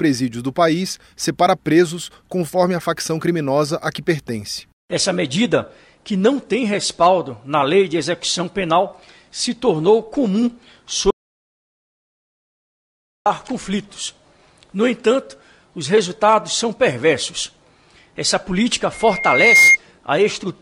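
From 11.1 to 13.26 s the sound stops dead for about 2.15 s. This is an audio dropout to silence, likely from the input being lost while recording continued. The waveform shows a flat line and the spectrogram a blank band, with no room tone.

At 18.93 s a loudspeaker feedback squeal begins. The microphone picks up its own loudspeaker and the loop rings at 2.1 kHz, swelling over roughly 0.7 s to about 10 dB above the signal, then stopping at 19.77 s. The spectrogram shows one bright horizontal line that thickens as it grows.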